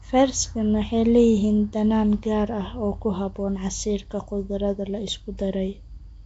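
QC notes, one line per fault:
Throughout, Nellymoser compression: the audio was likely run through a Nellymoser Asao encode at what sounds like 32 kbps. Bands starved of bits are filled with noise, leaving the speech with a plainly audible rough, hissy halo, a smeared underwater quality, and nothing above 7.7 kHz.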